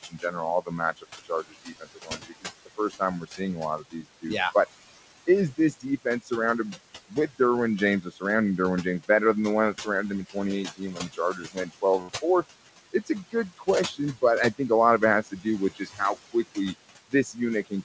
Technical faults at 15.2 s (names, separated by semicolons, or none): noise suppressor artifacts; speech cut by the noise suppressor